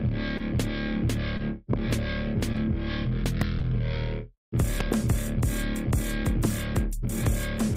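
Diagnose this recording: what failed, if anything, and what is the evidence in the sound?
Four brief smears interrupt the music at 0.37, 1.37, 2.53 and 3.59 s. Each is a momentary wobble where the sound stretches rather than cuts out. This is short concealed packet loss at the network stage. Each time about 20 ms of audio arrived too late for the decoder. The receiver filled the gap by continuing the preceding sound, for about 19 ms at 0.37 s, 17 ms at 1.37 s and 10 ms at the later two, then blended back into the real signal.

Sharp pops sit on top of the music, which carries on underneath, at 1.73, 3.41 and 6.45 s, with a quick double pop from 4.80 to 4.94 s. The ones at 1.73 s and 4.80 s stand roughly 15 dB above the music, and the other two roughly 10 dB. These are loud pops, likely from the analogue wiring stage: a sudden voltage step from a connector, switch or static discharge, shaped by the circuits that follow.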